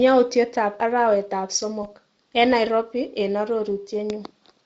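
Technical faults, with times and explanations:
1.83–1.87 s: VoIP packet loss concealed by the speech codec. A short stretch of the speech goes missing and is filled in. The gap fits a single lost 20 ms frame. The decoder repeats its last pitch and vocal-tract shape with falling gain, so the sound smears into a brief buzzy tone or coloured noise. Each frame builds on the one before, so the speech stays weak or distorted just after the gap. The Speex coding around it adds only light coding damage.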